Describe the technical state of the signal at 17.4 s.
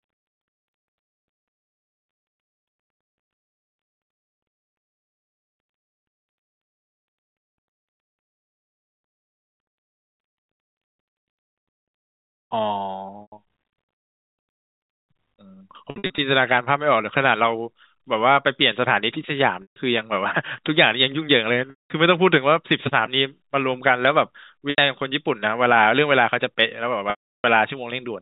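At 17.4 s the speech is intact, carried by ordinary narrowband telephone coding that behaves as expected there, with no fault at that moment.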